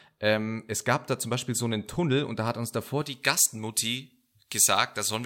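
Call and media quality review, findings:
Pre-emphasis left on, 3.02 s to end, after "da hat uns davor". De-emphasis stage missing; treble lift, consistent with a J.17 curve, never undone. Highs about 11 dB hot at 10 kHz relative to 1 kHz: thin, bright, sibilant speech.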